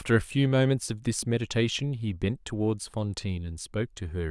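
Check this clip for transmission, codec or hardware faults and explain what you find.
No faults found.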